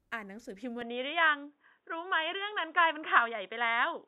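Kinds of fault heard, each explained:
Input switched to a poorer device: at 0.82 s the speech abruptly turns dull and boxy and stays that way to the end, with no gap at the change. That points most likely to the recording input moving to a narrower-band microphone or headset profile. On a spectrogram, all energy above 3.8 kHz vanishes at that instant, leaving a flat ceiling, and a faint new noise floor appears. The waveform's overall level steps by around 5 dB.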